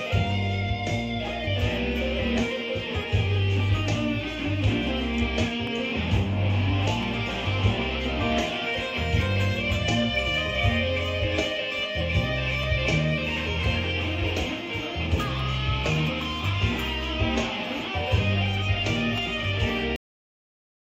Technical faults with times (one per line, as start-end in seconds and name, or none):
5.67 dropped samples
7.03 dropped samples
12.63 dropped samples
13.64 dropped samples
15.39 dropped samples
19.18 dropped samples
19.96-20.92 cut-off end